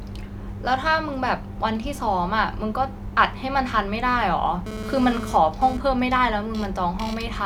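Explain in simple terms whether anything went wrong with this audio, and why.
A mobile phone on the old 2G network was sitting close to the recording equipment while it sent data. Such a phone transmits in short radio bursts, about 217 times a second, and the audio circuitry picked those pulses up and turned them into sound. The result is GSM phone buzz, a harsh, raspy buzz laid over the speech from 4.66 to 5.77 s. Because the phone was transferring data, the buzz comes and goes.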